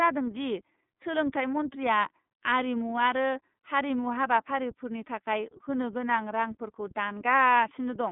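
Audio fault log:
Throughout, iLBC codec: the speech is squeezed into a narrow line band of roughly 150 Hz to 3.6 kHz with nothing above 3.8 kHz, so it sounds muffled and boxy. Each 30 ms frame's excitation is coded on its own, which fits a bitrate near 13.33 kbps and leaves a plainly audible rough, slightly synthetic grain.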